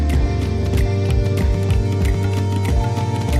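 From start to finish there's a doubled audio track: a second full-band copy trails the original by roughly 0.7 s at about the same level, with no decay or room colour. It's likely a second capture path or an edit holding two copies out of step.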